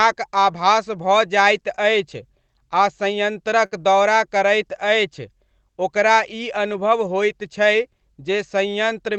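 A speech clip that came through a call path with Opus-style coding (the top end stops around 8 kHz and the coding noise fits roughly a 20 kbps stream), and there's one burst of packet loss from about 3.65 to 3.73 s, just before "दौरा करैत". The receiver papered over the hole by stretching and fading the last bit of sound for about 57 ms, so you hear a brief held smear instead of a clean cut. Then it jumps ahead, and roughly 60 ms of the original is simply gone.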